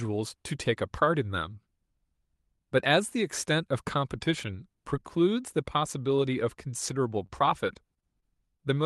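From about 6.87 to 8.74 s, a run of scattered short gaps: a handful of packets, roughly five, arrived late or not at all, and the receiver filled each hole by extending the preceding sound. About 100 ms of speech in total goes missing and is rebuilt, the longest single gap only around 20 ms. The speech stays intelligible, but brief ticks and small smeared hiccups surface through that final stretch, with the timing stretched by about 18 ms.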